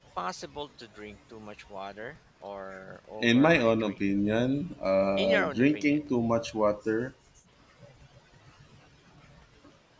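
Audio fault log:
The speech has gone through a call's microphone processing, which trims the lowest bass and leaves nothing above 8 kHz, and nothing in the signal goes wrong.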